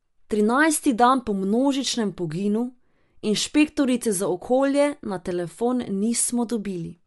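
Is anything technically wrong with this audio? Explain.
Yes. Throughout, the speech is likely Bluetooth LC3 compression: nothing above 11.5 kHz, with noise-filled upper bands giving a grainy, breathy edge, consistent with 10 ms frames near 48 kbps, unlike a clean low-pass.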